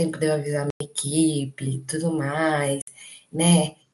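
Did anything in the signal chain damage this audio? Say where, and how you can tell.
Yes. The speech drops to silence from 0.70 to 0.81 s and from 2.82 to 2.88 s, then resumes further along as if it had kept playing. A waveform shows flat, sharp-edged gaps, and a spectrogram shows blank vertical bands. This is likely a Bluetooth dropout at wireless playback, where late packets were discarded.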